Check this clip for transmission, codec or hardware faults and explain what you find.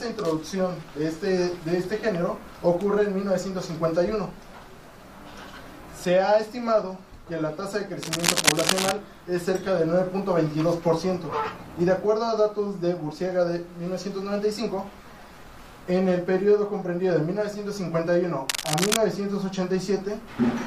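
Two bursts of cable scratch noise occur, from 8.02 to 8.92 s and from 18.49 to 18.97 s. Each is a dense, uneven rustle roughly as loud as the sound itself. A worn cable or connector being moved is the likely cause, its contact resistance fluctuating rapidly.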